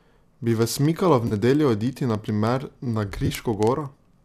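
From 0.11 s to 4.23 s, a receiver running on its own clock, not locked to the sender's digital link, slips by a single sample roughly every 0.05 s. That suggests a clock error of roughly 500 ppm. The result is word clock ticks: about a hundred sharp clicks at a steady pace across the speech, varying in strength.

At 1.28 s to 1.33 s, AAC frame loss with concealment removes 30 ms of audio, which fits three lost frames. The decoder rebuilds the gap from the last good spectrum, leaving a brief smeared, noisy patch instead of a dropout.

A second loss spreads 40 ms of missing audio across 3.20 s to 3.31 s, with the longest run about 20 ms. The concealment comes out as short, phasey smudges scattered through that 100 ms stretch. The faint roughness of the surrounding speech is likely from low-delay AAC-ELD coding at 64 kbps.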